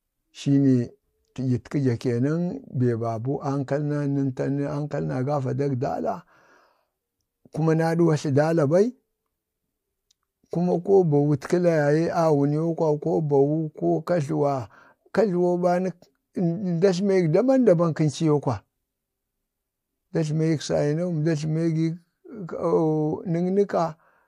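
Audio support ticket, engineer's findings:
Listened through the whole speech recording and found nothing to log; no faults turned up on any pass, so there's nothing to chase here.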